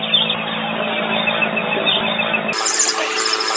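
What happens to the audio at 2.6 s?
From 2.53 s to the end at 3.56 s, a wrong sample rate doubles speed and raises pitch by 12 semitones, consistent with 8 kHz audio played at 16 kHz. A spectrogram shows everything shifted up an octave and squeezed in time.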